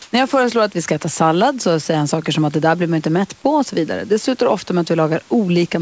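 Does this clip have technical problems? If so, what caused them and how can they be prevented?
Yes. Comfort noise in place of the background appears from 0.02 to 0.12 s, where about 100 ms of the real background, which sits roughly 35 dB below the loud parts, gives way to a steady, featureless hiss whose level differs by about 7 dB. The likely cause is discontinuous transmission: the sender's voice detector judged the opening to be silence and stopped sending, so the receiver filled the gap with synthetic noise. Disabling discontinuous transmission, or making the voice detector less aggressive, prevents this.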